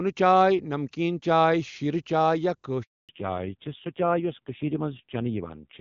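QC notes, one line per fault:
2.83–3.09 s, handover gap: the speech fades out within a few tens of milliseconds and drops to silence for 260 ms before sound returns. The call was passed from one network link to another, and no speech frames reached the receiver while the switch was under way, so nothing could be decoded for that stretch. Whatever was spoken during those 260 ms is gone, not muffled, and the decoder simply resumes once the new link delivers frames.
3.09 s to end, fallback to narrowband: from the moment the gap closes, all content above 4 kHz is missing, and the speech sounds duller, boxier and rougher compared with the clear wideband HD Voice before 2.83 s. The call left the AMR wideband (HD Voice) codec, whose high-rate coding fits 23.85 kbit/s, and dropped to the older narrowband AMR codec. The roughness points to a low rate of about 5.9 kbit/s, where the coarse vocal-tract model adds grit.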